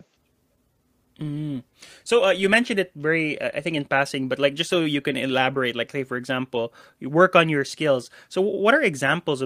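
Listening closely to the speech, nothing stood out as a technical fault at any point.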